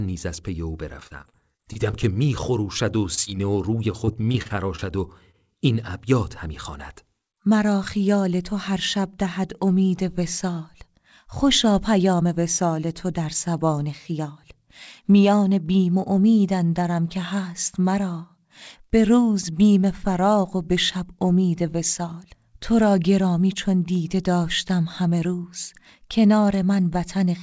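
From 1.00 to 2.45 s, repeated packet loss (robotic sound): roughly a dozen dropouts, the longest 34 ms, each patched by extending the previous sound, leaving choppy speech with pieces missing. Short concealed packet loss follows at 3.15 to 3.19 s and 3.25 to 3.28 s: two brief holes filled from the preceding sound, heard as quick smears or wobbles. From 3.92 to 5.36 s the robotic packet-loss pattern returns, with about ten gaps of up to 31 ms. From 6.11 to 7.47 s, a jitter buffer speed-up trims around 70 ms of pitch-period slices to reduce delay, so the speech runs about 4% faster at unchanged pitch. Throughout, the call path passes nothing above 8 kHz.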